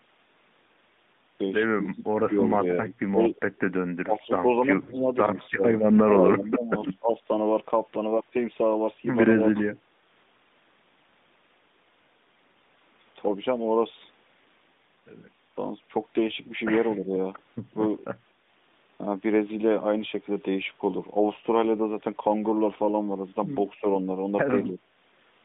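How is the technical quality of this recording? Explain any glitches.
The recording has two kinds of fault: repeated level dips from double-talk suppression and one short dropout from lost AMR speech frames. The narrowband mobile path, about 150 Hz to 3.7 kHz with light codec colouring, sounds like the 12.2 kbps AMR-NB mode.

Speech suppressed in double talk appears from 1.82 to 7.29 s, with about two seconds of that span affected and dips of up to about 20 dB. Shorter, shallower dips occur at 9.52–9.56 s (about 10 dB), 16.97–17.13 s (about 5 dB) and 24.67–24.79 s (about 5 dB). The likely cause is an echo canceller that could not tell the near talker from loudspeaker echo while both sides spoke, so it attenuated everything. The result is audible ducking.

Lost AMR speech frames occur from 4.82 to 4.96 s, with about 60 ms missing, which fits three 20 ms frames. The decoder bridged the gap by repeating the last good parameters at falling gain. 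This gives a brief smeared, fading sound before the sound returns weak or rough for a moment.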